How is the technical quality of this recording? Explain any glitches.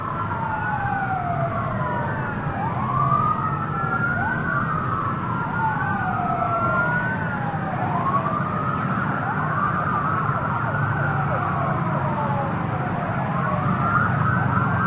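No glitches turn up anywhere in the recording. The sound carries the narrow band typical of a call path, with nothing above 4 kHz, which fits G.711 mu-law coding.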